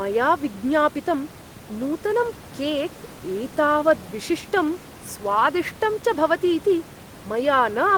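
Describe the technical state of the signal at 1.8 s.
At 1.8 s the speech signal is intact, with only the room's own background noise sitting about 22 dB below the voice, which is part of the recording rather than a fault.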